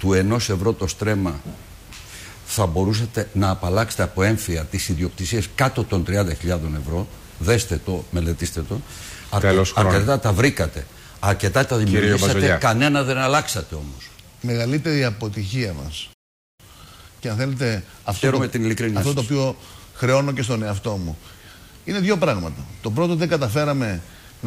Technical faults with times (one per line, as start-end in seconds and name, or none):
16.13-16.60 playback stall
16.60-19.60 time-compressed catch-up